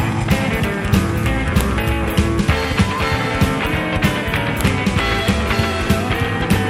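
At 1.61 s and again at 4.61 s there is a sharp, loud click, the file header played as audio. The two events are exactly 3.0 s apart, so pieces of about that length were joined without their WAV headers being stripped, and those few dozen header bytes were decoded as sample values. On a waveform each shows as a brief spike standing well clear of the surrounding signal; on a spectrogram, a thin vertical line spanning the full frequency range.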